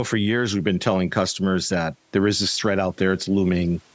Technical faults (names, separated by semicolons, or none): none